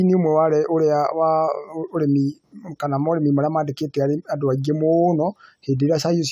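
No technical faults are audible.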